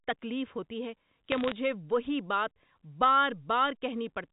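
A short burst of sharp ticks and crackle breaks into the speech from 1.32 to 1.52 s, right after "تکلیف ہوتی ہے", while the speech underneath keeps its level and character. These are bit errors on a digital phone line: single flipped bits in the logarithmic 8-bit samples, each corrupting one sample. Flips landing on the sign or upper bits throw a sample far off and click. The density suggests an error rate of roughly half a percent. The band-limited sound with nothing above 4 kHz fits a 64 kbit/s G.711 A-law telephone path.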